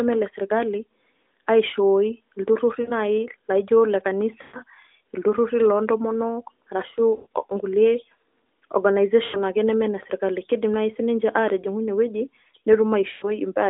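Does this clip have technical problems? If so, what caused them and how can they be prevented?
Yes, there are lost AMR speech frames at 2.82, 4.42, 7.16, 9.24 and 13.12 s. Each time, the decoder repeats the last good pitch and vocal-tract settings at falling gain, so the sound smears and fades for 60 to 120 ms, then comes back rough. Better radio coverage or stronger error protection would prevent this.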